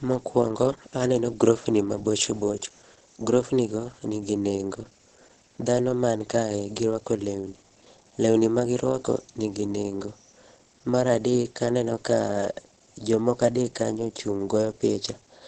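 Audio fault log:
throughout, Opus compression: the speech sounds muffled and hoarse, with nothing above 8.7 kHz. On a spectrogram the energy stops at a flat, hard ceiling there, and the harmonics below look smeared and grainy instead of cleanly striped. The damage is heavy. The likely cause is Opus running in its SILK speech mode at wideband, which fits a low rate near 12 kbps, where the encoder models the voice coarsely and discards fine spectral detail.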